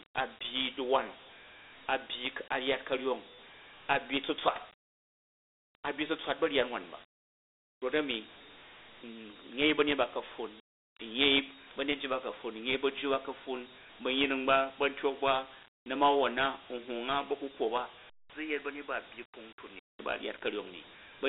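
Throughout, the speech passes through Dialogic VOX ADPCM coding at 32 kbps, which fits 4-bit samples at 8,000 per second. The band runs from 300 Hz to 3.7 kHz, nothing survives above 3.9 kHz, and a plainly audible gritty hiss follows the voice.

From 18.10 to 19.99 s, the input was likely switched to a poorer device. A 200 ms silence marks the switch, just before "ba a̱". The sound then drops roughly 10 dB, loses everything above 3 kHz, and gains a faint new background noise.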